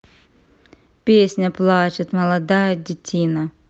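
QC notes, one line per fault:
2.49–3.69 s, call bitrate drop: the call's bandwidth estimate fell and the Opus encoder was pushed to far fewer bits, consistent with a fall from about 48 to 18 kbps. The coarser coding makes the speech rough and watery for the final 1.2 s, with no recovery before the end.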